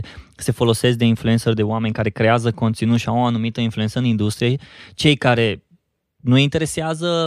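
No technical faults can be heard anywhere in the speech.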